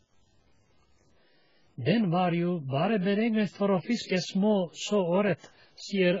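Throughout the speech, quiet passages and decaying syllable tails turn gritty and grainy, with the distortion riding on the signal about 40 dB down rather than sitting as a steady hiss. This is likely low bit depth without dither, truncated to around 9 bits. Unlike ordinary noise, it vanishes in true silence and changes character with each sound.

Across the whole clip, nothing is heard above 7.5 kHz, so the speech sounds dull and smeared, with a warbling, fizzy texture on sustained vowels and sibilants. This is likely heavy AAC compression, consistent with AAC-LC at roughly 12 kbps. Unlike the truncation grit, these artefacts are a lowered cut-off and swirling texture, not level-dependent graininess.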